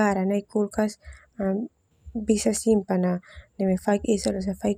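No technical faults can be heard anywhere in the recording. The speech continues without any audible event that would point to a problem in the signal chain.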